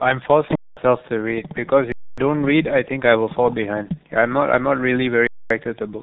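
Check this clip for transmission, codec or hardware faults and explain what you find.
Two faults are present: heavy low-bitrate codec damage across the whole speech clip, and three short playback underruns.

G.723.1 codec, throughout. The speech runs through G.723.1 at 6.3 kbit/s, and nothing survives above 3.9 kHz. Its 30 ms frames and slowly updated voice model leave the speech muffled and hoarse, with consonants smeared together. A simple low-pass filter would only dull the top. Here the timbre itself is roughened, which marks it as codec damage.

Underrun with held sample, at 0.55–0.77 s, 1.92–2.18 s and 5.27–5.50 s. Each time the output buffer emptied and the converter held its last value for about 214 ms, 256 ms and 234 ms. The middle gap fits a 4096-sample buffer. The sound stops almost without a click because the waveform freezes flat, usually at a level other than zero, instead of dropping to silence. 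Live audio was skipped during each gap, roughly 200 ms, 300 ms and 200 ms.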